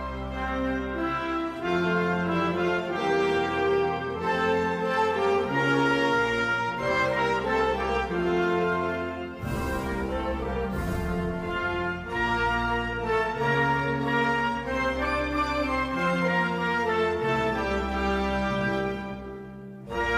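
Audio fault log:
Nothing stood out on listening to the clip.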